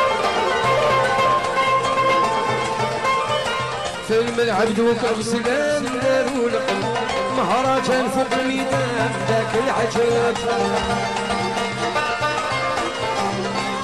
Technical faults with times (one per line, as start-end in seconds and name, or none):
0.00-13.83 doubled audio track